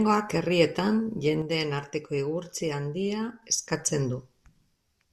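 At 1.42 s the level drops abruptly by about 6 dB, and at 3.42 s it snaps straight back up. That's a sudden gain jump: the speech and the background noise fall together in a single step, with no fade in or out, so the quieter stretch sounds like someone flicked a switch. It's likely a gain setting applied from one sample to the next without any smoothing ramp.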